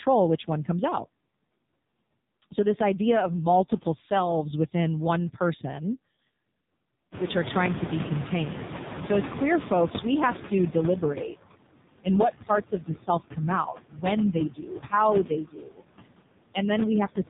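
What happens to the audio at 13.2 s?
Speech cut by the noise suppressor, from 13.06 to 13.39 s: the suppressor mistakes part of the speech for background and pulls it down by up to about 15 dB, so roughly 150 ms of it sounds swallowed and faint. Noise suppressor artifacts run through this moment too, with the steady room noise held about 21 dB lower. The AMR narrowband mobile codec also shapes it. Nothing above 3.8 kHz passes, and the heavily buzzy, synthetic tone fits a low-bitrate mode near 5.9 kbps.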